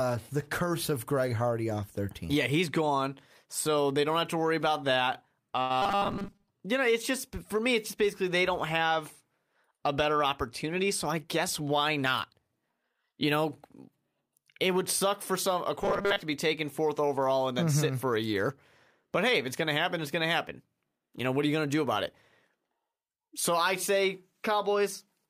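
Speech with three kinds of network playback fault. At 5.61 s, right after "to worry about that", there is a short stall from a late packet. The sound hangs for about 85 ms and then resumes from the same point, so nothing is lost but the syllable is held slightly too long, with a slight buzz or dip. The receiver's jitter buffer ran dry and it stretched the last audio until the packet arrived, which also pushed playback about 85 ms later. Immediately after, from 5.82 to 6.48 s, leading into "you know it's just", the speech turns into a rigid metallic drone, and the same sound returns from 15.83 to 16.22 s. This is robotic sound from repeated short buffers. The buzz sits at 200 Hz, which fits a 5 ms chunk being looped. Most of the real audio in those spans is replaced by repeats, likely because fresh audio was arriving too seldom to fill playback. From 10.64 to 12.34 s, starting after "a better", the talker speeds up slightly while pitch stays the same. 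This is a jitter buffer speed-up, running at 104% speed. The receiver trimmed short pitch-period slices, roughly 70 ms in total, to shrink a backlog of buffered audio and bring latency back down.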